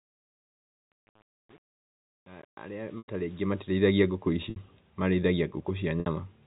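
Packet loss with pitch repetition interrupts this telephone-band speech at 2.98 s for 100 ms, and at 4.50 s and 6.00 s for 60 ms each. The receiver loops the last pitch period across each gap, giving a held, buzzy tone that fades before speech resumes.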